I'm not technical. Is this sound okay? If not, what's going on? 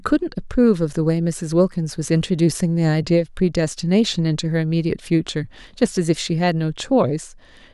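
Yes, no faults to report.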